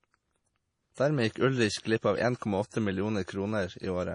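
Speech carrying heavy MP3 compression throughout, likely from an encode around 32 kbps. Nothing remains above 10.5 kHz, so a spectrogram shows a flat ceiling there with flickering holes below.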